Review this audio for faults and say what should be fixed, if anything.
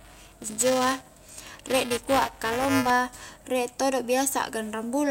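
Buffer tearing from 0.00 to 2.90 s, ending just before "rie todo": a steady 375 Hz rattle where writer and reader cross, splicing in a small slice of audio about 5 ms stale, which fits a 128-sample buffer. Keep the write pointer a safe margin ahead of the hardware read position, using larger buffers or tighter scheduling.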